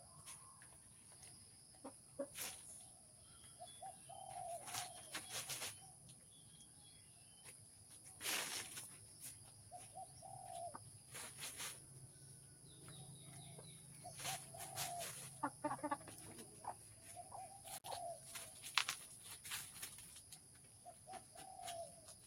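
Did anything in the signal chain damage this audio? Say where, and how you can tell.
Yes. In the call-processing stage, a speech-tuned noise suppressor was left running on this non-speech audio for the full clip. Sustained content and tails are treated as background noise and pulled down, while transients pass, so the level breathes with a swing of around 10 dB. That pumping and thinning is the audible signature of a noise suppressor applied to music or sounds rather than voice.

The same processor produces distinct dips where it clamps a sound it has misjudged as noise, at 0.79–1.05 s, 1.47–1.81 s, 2.95–3.32 s, 5.95–7.43 s, 7.69–7.87 s, 12.44–12.64 s and 20.23–21.07 s. Each is a sound cut by the noise suppressor, dropping by about 4 dB at its deepest. Held and decaying material sinks or has its decay truncated, with the longest episode running about 1.5 s around 6–7 s.

In the analogue wiring, an intermittent contact opens at 17.77–17.85 s, with the signal missing for about 59 ms. 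The dropout starts and ends with crackles, and faint hiss remains during the gap. That pattern points to a loose plug or cable momentarily breaking the circuit, not to a digital dropout, which would not leave hiss behind.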